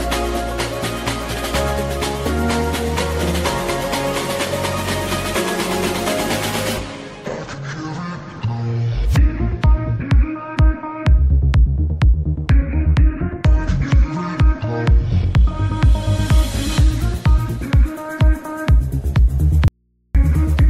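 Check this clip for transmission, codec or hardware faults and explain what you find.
An audio dropout to a faint residue runs from 19.68 to 20.15 s. For about 0.47 s the sound cuts out abruptly, leaving only mains hum roughly 45 dB below the signal. The likely cause is a lost signal feed while the downstream path stayed live.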